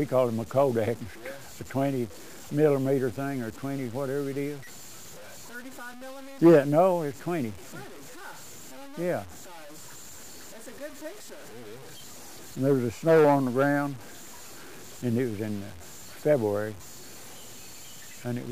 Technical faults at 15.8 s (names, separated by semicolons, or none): low bit depth without dither